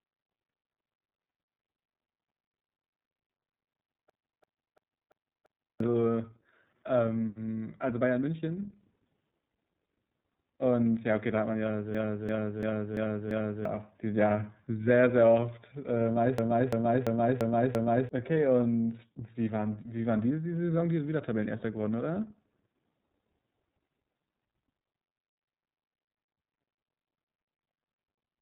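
Throughout, the speech carries iLBC codec damage: it sounds rough and slightly synthetic from frame-by-frame excitation coding, which fits 30 ms frames at roughly 13.3 kbps. A spectrogram shows nothing above 3.8 kHz, a flat ceiling across the clip.

At 4.10 to 5.80 s, 11.95 to 13.65 s and 16.38 to 18.09 s, a system hang loop repeats one 341 ms slice five times, a stutter at 2.93 Hz. A frozen system left the hardware cycling its ring buffer, which fits a 16384-sample buffer. Each time, about a second and a half of speech is lost. The waveform shows identical blocks tiled end to end.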